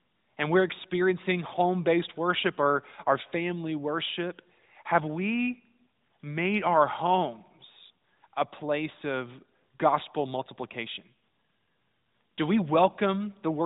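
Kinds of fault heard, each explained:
No faults heard.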